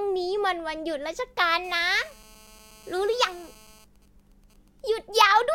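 GSM phone buzz runs from 1.64 to 3.85 s in this speech recording: a hard, raspy 217 Hz tone with a dense stack of harmonics, about 28 dB below the speech. A 2G phone close to the audio path was transmitting during a call, and the circuitry rectified its regular radio pulses into a steady buzz with no relation to the speech. GSM signalling bursts follow from 3.96 to 4.92 s, fainter at roughly 35 dB down. They are even ticks with a longer 217 Hz buzz twice a second. This is a phone in a call, but with its user silent, so it sent only short groups of bursts that the audio circuit again demodulated.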